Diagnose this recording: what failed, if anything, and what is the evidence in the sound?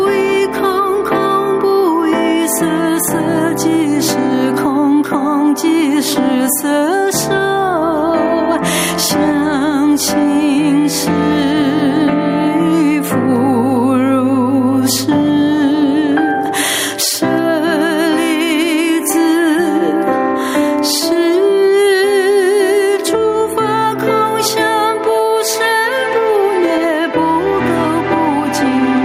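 The fault is gain pumping, present throughout the recording. The swing is about 15 dB. Loud and soft passages sit unnaturally close in level, so the sound feels squashed. The stage is likely the processing chain after the microphone, where input gain set far too high drives a fast compressor or limiter to clamp down on every peak.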